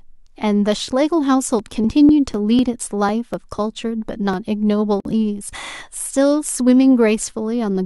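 Speech, with periodic USB or driver dropouts from 1.59 to 4.34 s: tiny skips of about a millisecond every 0.25 s, heard as evenly spaced ticks, not random clicks. At 5.00 s a 50 ms gap at a join of encoded pieces opens, then the speech resumes exactly where it stopped, which fits encoder delay and padding left in.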